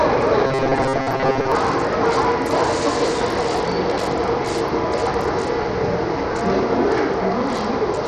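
Everyday sounds, with robotic sound from repeated short buffers between 0.47 and 1.52 s: a rigid 134 Hz buzz, likely from repeating roughly 7.5 ms fragments instead of fresh audio, which replaces most of that stretch. Throughout the clip, gritty noise and unstable, flickering treble point to Bluetooth SBC compression with a small bit pool, which fits a low rate of about 80 kbps that starves the upper sub-bands of bits.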